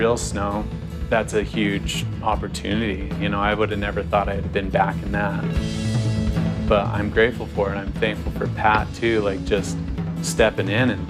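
No technical faults can be heard anywhere in the audio.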